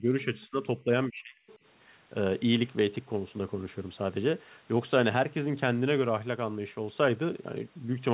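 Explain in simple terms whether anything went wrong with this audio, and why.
Near the start the talker's voice drops away three times: a fairly deep dip from 0 to 0.59 s, a short one from 0.79 to 0.88 s, and an almost complete cut-out from 1.09 to 1.38 s. This is speech suppressed in double talk, likely because the echo canceller turned everything down while both sides spoke at once.

Right after that, from 1.47 to 1.58 s, a very faint second voice slips in for a brief moment. This is the other side's voice leaking through, likely because the echo canceller didn't fully remove the loudspeaker sound from the microphone.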